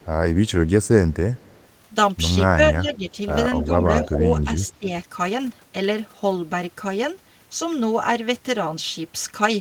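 From 0.00 to 1.68 s there is an echo leak: a very faint copy of the speech trails it by 237 ms, likely because a loudspeaker on the far end fed the microphone and its echo canceller missed some of it. On a spectrogram it appears as a ghostly, much weaker repeat of each harmonic pattern, shifted right by about a quarter second.

Between 2.55 and 4.89 s, speech is suppressed in double talk. The level drops in pieces, by roughly 10 dB at the deepest, for under a second in total. The likely cause is an echo canceller turning everything down when both sides spoke at once. The waveform envelope shows notched dips, and the spectrogram shows those stretches thinning.

Inside that stretch, from 3.62 to 4.69 s, a second, much louder echo leak returns with a 255 ms delay, about 10 dB below the direct speech. It sounds like a doubled voice and shows as a strong repeated pattern on the spectrogram.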